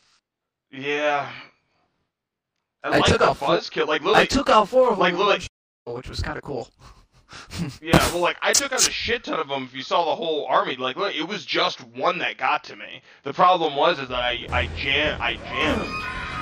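Channel delay (comb filtering) runs throughout the clip. One channel arrives about 20 ms after the other, and when the two are summed to mono, whatever they share cancels at a regular series of frequencies, with the first notch down at around 20 Hz and more following at even spacing up the spectrum. The result is a rough, slightly doubled quality over the whole sound.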